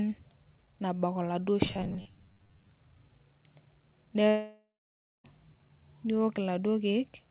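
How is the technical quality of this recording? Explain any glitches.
The recording has two glitches, and everything is band-limited with nothing above 4 kHz, which points to a narrowband telephone-style codec on a call path.

From 1.68 to 2.70 s, robotic sound from repeated short buffers: speech becomes a rigid metallic 100 Hz buzz, likely from 10 ms chunks being looped while a large share of real audio is skipped.

From 4.28 to 5.26 s, a long network dropout: the last sound trails off and fades, then about 0.59 s of silence. Roughly 0.96 s of audio was likely never delivered.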